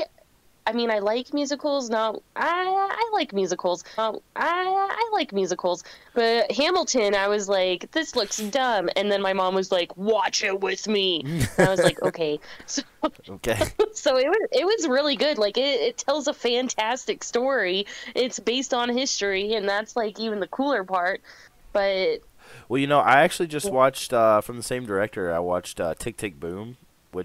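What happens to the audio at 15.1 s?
Nothing goes wrong at 15.1 s; the audio there is intact, with no dropout, click, distortion or other fault.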